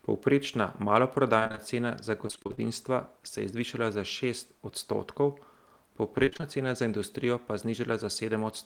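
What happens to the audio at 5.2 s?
At 5.2 s the speech runs on intact, with no audible dropout, click, distortion or other fault at that moment.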